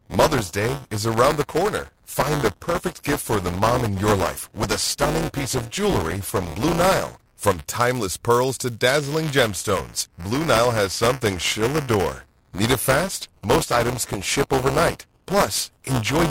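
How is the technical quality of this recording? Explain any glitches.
The recording has one persistent fault, buffer tearing, throughout the speech. It sounds like a steady robotic rattle at 200 Hz riding on the audio wherever there is signal. The writing program and the playback hardware have drifted into each other's period, so in each 5 ms cycle about a tenth of the buffer replays audio from roughly 10 ms earlier, hard-spliced at both edges.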